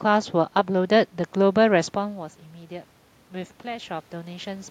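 A speech recording with one fault: automatic gain rising from 3.61 s to 4.66 s. The input level drops by about 14 dB, and the automatic gain control responds by raising its gain by about 4 dB over roughly a second. Voice and room noise swell together, because the gain stage lifts everything it receives. The talker's change in distance around the 2 s mark comes from the room, not from the system.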